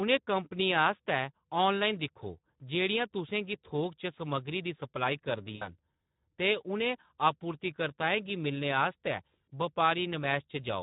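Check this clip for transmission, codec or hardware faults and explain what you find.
Two faults are audible: Speex codec damage throughout the speech, and two stretches of VoIP packet loss concealed by the speech codec.

The Speex codec damage runs through the whole clip. Speex is a CELP coder. It models the voice as an excitation signal driving a vocal-tract filter. Here the excitation gets too few bits, which fits a bitrate of about 11 kbps. The damage is plainly audible. The voice sounds noisy and hoarse.

Packet loss concealed by the speech codec occurs at 5.55 to 5.69 s and again at 9.44 to 9.48 s. Packets went missing, so the decoder repeated its last pitch and filter while cutting the gain frame by frame. The first gap lasts 60 ms, which fits three lost frames. The second lasts 40 ms, which fits two. Each sounds like a brief smear that fades. The voice stays weak or rough for a short time after each gap.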